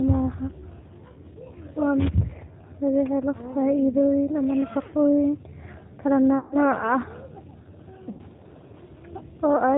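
Speech passes through the G.729 codec, at a quality that points to its 8 kbit/s mode. The pulse-based excitation gives the speech an audibly rough, synthetic texture, and a spectrogram shows nothing above 4 kHz, with smeared, grainy harmonics below that. VoIP packet loss concealed by the speech codec occurs at 6.39–6.56 s, about 120 ms lost, and at 8.11–8.21 s, about 80 ms lost. Each gap is bridged by sound extrapolated from the last pitch and filter that fades. In the waveform these stretches look like a decaying pattern, and in the spectrogram they appear as stretched, fading sound, with weak sound briefly following as the decoder recovers.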